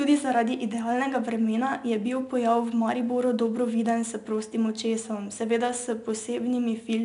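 4-bit ADPCM compression runs through the whole speech clip. Each sample is coded as a coarse 4-bit step away from a predicted value, with the step size adapting on the fly, so the quantisation error becomes broadband noise that rises and falls with the speech level. It is plainly audible as a gritty hiss riding on every loud syllable and roughness on sharp onsets. Nothing above 10.6 kHz survives, which points to a bitrate of about 89 kbps.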